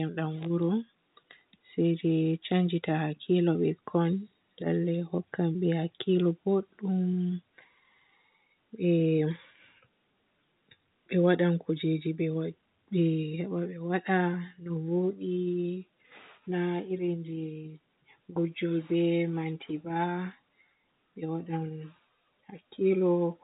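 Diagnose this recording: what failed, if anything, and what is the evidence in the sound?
Nothing has failed: the speech carries the expected narrow band of G.711 telephone coding, with no content above about 3.8 kHz and at most faint coding texture riding under the signal.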